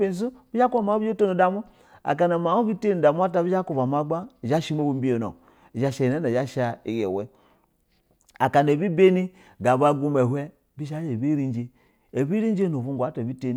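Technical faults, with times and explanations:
No technical faults can be heard anywhere in this speech recording, and the signal stays steady and intact from its opening moment to its close.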